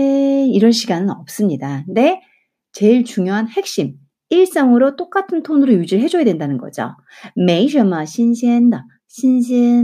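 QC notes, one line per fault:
No faults found. Nothing in the speech calls for a note.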